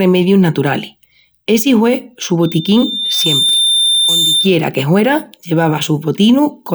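From 2.42 s, after "naturalis essi hue su", a loudspeaker feedback squeal at 3.6 kHz swells over about a second to roughly speech level, then stops at 4.58 s before "que huera".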